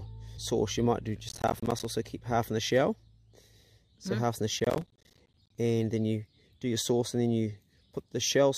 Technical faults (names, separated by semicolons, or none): damaged data in a compressed stream; processor overload crackle